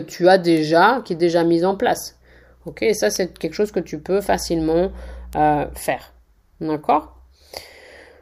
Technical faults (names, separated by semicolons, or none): bit error spike; mains hum